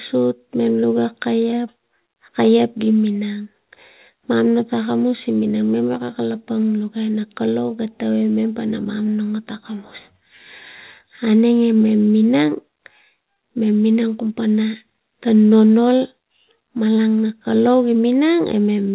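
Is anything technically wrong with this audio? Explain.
No, nothing is technically wrong with this speech clip. It has passed through a call path whose telephone-style codec is working as intended, which is why nothing is heard above 4 kHz, a limit that fits narrowband G.711 mu-law.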